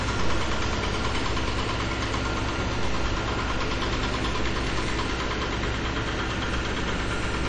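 From start to finish the treble stops dead at 10.8 kHz, and weak detail flickers with a watery, swirly quality and smeared attacks, likely MP3 compression at a low bitrate near 48 kbps. A spectrogram shows a flat ceiling at 10.8 kHz and patchy, blinking high-frequency blocks.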